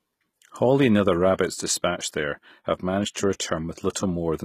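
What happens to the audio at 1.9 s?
HE-AAC compression affects 1.9 s, as it does the whole clip. The treble is likely rebuilt by spectral band replication from copied lower bands, which fits a bitrate around 20 kbps, so the speech's s sounds turn plainly gritty and metallic, with nothing above 14.9 kHz.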